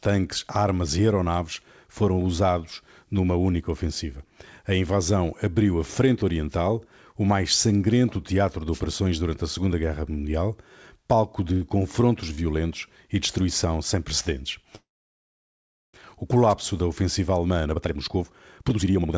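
At 8.72 to 8.81 s, right after "mais sangrento teatro de" and before "durante a", a wireless microphone noise hit breaks in. The FM radio link fades as reflections cancel, so receiver noise swells into a brief swish of static. Unlike a dropout, the sound is masked by hiss rather than removed.

From 14.76 to 15.95 s, after "e destruição sem precedentes", the audio stops. A short fading continuation turns into about 1.1 s of silence, and the sound then resumes exactly where it left off. This is a call audio freeze, likely caused by packets held up in transit until the jitter buffer ran dry. Roughly 1.2 s of delay is inserted but nothing is lost, which separates it from a packet-loss gap that skips material.

A second wireless microphone noise hit, about 50 ms long, falls at 16.49 to 16.54 s, just before "da ofensiva". It is again a quick static burst from a fading radio signal.

From 17.51 s to the end, the sound runs at about 155% speed with pitch unchanged. 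This is a jitter buffer speed-up. To cut the extra buffered delay, the receiver cut out many pitch-period slices, roughly a second in total. The result sounds hurried, not chipmunk-like, which distinguishes it from a sample-rate error. Throughout the clip the call path's band stops at 8 kHz, which fits G.722 at 64 kbps.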